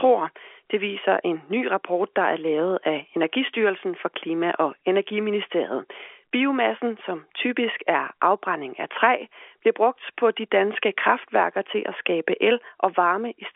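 Nothing's amiss with this bit of speech; it simply comes across as an ordinary telephone-line recording with the usual narrow band, and there's no fault to point to anywhere in it.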